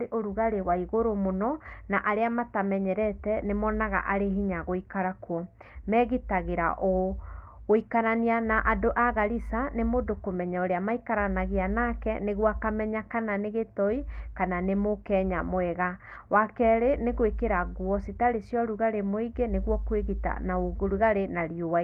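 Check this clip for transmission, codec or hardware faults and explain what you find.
Nothing to flag here: the speech comes across steady and intact, with no transmission, codec or hardware trouble anywhere in the recording.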